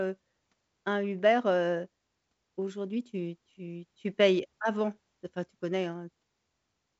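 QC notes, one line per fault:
No faults found in the speech. The G.722 wideband path is audible only as a band edge near 7.8 kHz, with at most a faint upper-band hiss, which fits the codec's full 64 kbit/s mode.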